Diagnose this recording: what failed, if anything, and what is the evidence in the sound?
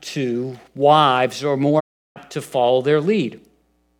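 A digital broadcast dropout hits the speech from 1.79 to 2.18 s. Reception or decoding failed, so the receiver muted with a 20 ms fade and resumed about 0.35 s later, which fits roughly eleven lost frames. Unlike packet-loss concealment, the gap is clean silence with nothing synthesised.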